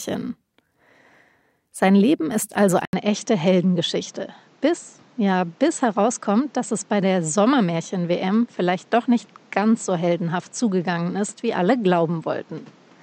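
Speech, and right after "ist also" at 2.85 s there is an 80 ms gap. The sound then continues duller and roughly 5 dB quieter, with nothing above 8.1 kHz and a new noise floor about 35 dB down, likely an input switched to a poorer device.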